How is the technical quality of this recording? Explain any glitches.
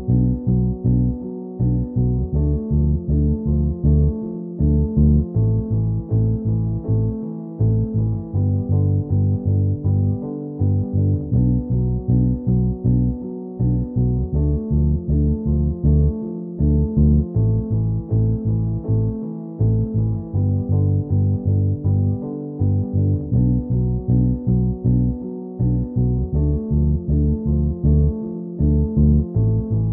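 The technical quality of the recording is good, with no glitches to explain.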